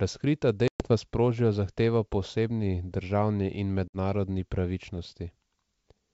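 At 0.68 s the speech drops into a hard-edged silent hole of about 120 ms, consistent with several lost packets, and resumes at "sprožijo zahtevo po" slightly distorted, settling by 0.91 s. At 3.88 s a shorter 60 ms gap does the same, recovering by 3.97 s. This is packet loss on an ADPCM call: the receiving decoder's adaptive predictor and step size drift out of step with the sender's.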